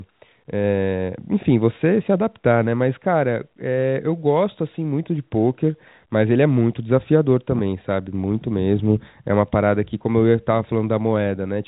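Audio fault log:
Nothing to log here; the speech simply carries the usual telephone band with nothing above 3.8 kHz, which fits G.711 A-law coding at 64 kbps.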